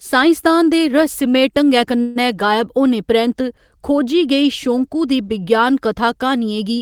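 Stalled packets likely emptied the jitter buffer, causing a call audio freeze from 2.01 to 2.18 s: the last sound stretches into a fading buzz or hiss, delaying the speech by 142 ms.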